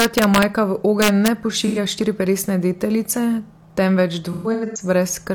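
Violent cracks, much harsher than clipping, break through the loudest peaks from 0.00 to 0.43 s and again from 1.02 to 1.28 s. This is integer overflow: with the gain driven about 2 dB past full scale, peaks wrapped to the opposite sign instead of being limited.

A brief smeared, phasey patch at 1.67 to 1.78 s, just before "štiriperesne deteljice", comes from AAC frame loss with concealment. About 85 ms went missing, which fits two frames, and the decoder filled the gap from the last good spectrum. From 4.32 to 4.82 s, about 300 ms of losses spread across roughly 430 ms leave a noisy, smeared stretch. The longest gap runs around 150 ms.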